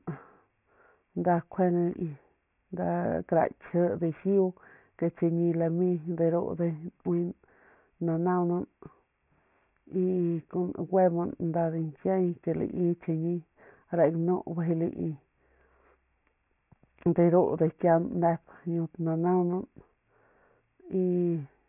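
From start to finish, the speech has a gritty, metallic edge. S and sh sounds come out harsh and oddly pitched, and the spectrum runs hard up to about 3 kHz, then stops. This is aliasing. Everything above 3 kHz has folded back below that line as unrelated tones, which fits a drop to a 6 kHz sample rate without an anti-aliasing filter first. The folded content sits faintly under the speech, well below its level.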